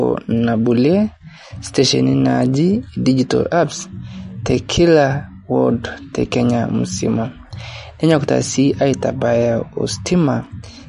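From start to finish the speech carries plainly audible damage, likely from MP3 compression at a low bitrate, which fits roughly 40 kbps. The treble stops dead at about 10.6 kHz, where the encoder drops the top band to save bits, and weak frequency lines flicker in and out between frames. That gives the speech a watery, swirly quality, with chirpy metallic edges on s sounds and smeared attacks.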